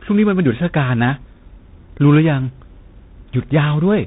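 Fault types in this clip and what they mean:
Tandem speech coding, throughout: two speech coders in a row, likely ADPCM then CVSD, the second re-coding the first's damaged output, leaving rough, noisy audio cut above 3.8 kHz.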